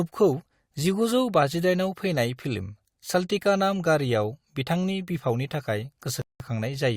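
At 6.22 s the speech halts in a rebuffering stall: playback ran dry of downloaded audio and waited about 0.18 s until 6.40 s, then resumed exactly where it stopped. On a waveform and spectrogram this shows as a flat, empty gap with no lost material.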